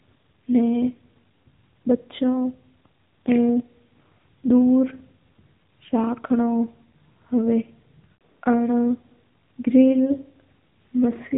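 From start to finish the speech has gone through the AMR narrowband mobile codec, and it's plainly audible. Nothing gets through above about 3.8 kHz, so everything sounds boxed-in and phone-like. The codec rebuilds the voice from a vocal-tract model fed by a handful of pulses every few milliseconds, and at this quality that comes across as a buzzy, synthetic edge, which fits an AMR-NB mode somewhere around 8 kbps.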